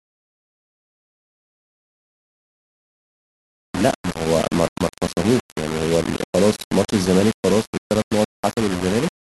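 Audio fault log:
Throughout: low bit depth without dither. The speech carries a coarse, grainy distortion that rises and falls with the sound, with quieter passages turning gritty and the softest moments dropping out or sputtering between adjacent levels. The error sits only around 15 dB below the signal, which fits a likely 4-bit quantisation with plain rounding: with so few steps and no dither, the rounding error stays locked to the waveform instead of spreading into steady noise.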